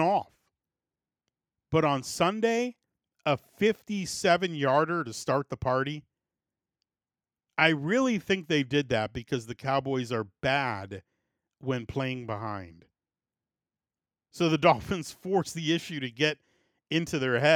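No technical faults can be heard anywhere in the recording, and the speech signal stays intact and continuous throughout.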